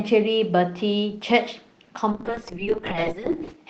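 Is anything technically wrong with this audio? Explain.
Yes, there is a call bitrate drop from 2.12 s to the end. The encoder's bit budget collapses, fitting a fall from 32 to 7 kbps, so the speech turns watery and dull without the gaps that packet loss would leave.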